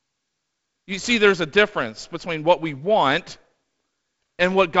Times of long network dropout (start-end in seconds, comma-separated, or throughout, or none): none